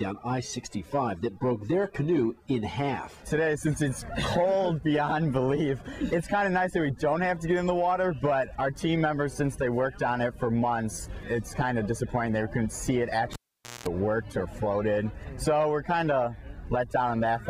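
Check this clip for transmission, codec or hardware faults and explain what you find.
There is one hardware fault. From 13.33 to 13.87 s, a live cable is pulled and plugged in. A pop opens a near-silent gap of 0.49 s. While only the plug's tip makes contact, 60 Hz mains buzz leaks in for 0.2 s. A second pop marks the sound's return.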